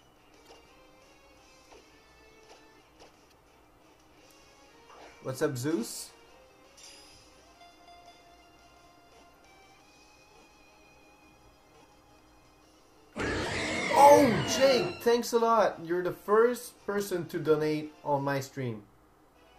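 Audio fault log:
0.43–0.48 s, 3.28–3.33 s and 9.32–9.36 s: damaged data in a compressed stream. Each event is a short, roughly 40 ms disturbance that cuts across the surrounding audio. Bytes in the compressed stream at these points were corrupted, so the decoder misread the affected frames and lost sync, disrupting the output until it locked onto a valid frame header again.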